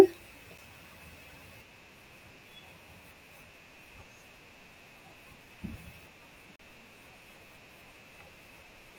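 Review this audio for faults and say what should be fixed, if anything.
Two gaps between stream segments interrupt the speech. The first is a hard-edged silent hole of 8.7 ms at 0.58 s. The second runs from 6.56 to 6.59 s and adds 35.7 ms of silence. At each point the time stamps of two adjacent segments fail to meet, and the player fills the space with silence. No audio is lost. The timeline just stretches. To prevent this, align segment time stamps so each segment starts exactly where the previous one ends.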